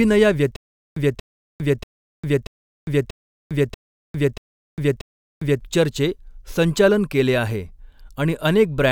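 Stutter with silent gaps from 0.56 to 5.61 s in this speech clip: a 233 ms fragment repeats eight times, each followed by about 402 ms of digital silence, likely a stalled stream retrying.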